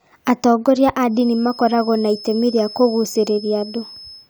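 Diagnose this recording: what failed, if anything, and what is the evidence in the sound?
The acoustic path from loudspeaker back into the microphone has likely settled just short of runaway gain, leaving a feedback whistle. A thin, steady 5.2 kHz tone sits about 20 dB beneath the speech from 1.07 s to the end, swelling and fading slowly in level.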